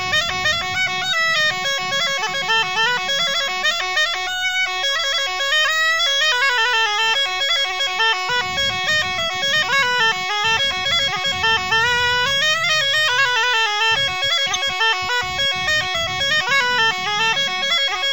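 No technical faults can be heard anywhere in the recording. Nothing in the signal calls for a timestamp or a closer look.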